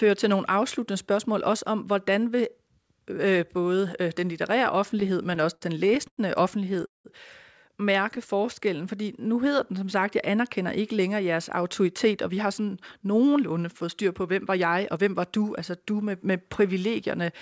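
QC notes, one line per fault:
5.00–6.20 s, repeated stalls (stutter): eleven short gaps, the longest 97 ms, are filled by continuing the last sound. This adds about a quarter second of drag with nothing lost.
6.86–7.08 s, call audio freeze: the sound halts for 188 ms and decays to 160 ms of silence before resuming intact. The likely cause is delayed packets draining the buffer.
8.33–10.05 s, jitter buffer slow-down: repeated pitch periods stretch the passage by 129 ms. It plays at 93% speed with unchanged pitch, and sounds are drawn out.
12.06–16.13 s, jitter buffer speed-up: trimmed pitch periods remove roughly 300 ms. It plays at 106% speed with the pitch intact and sounds slightly hurried.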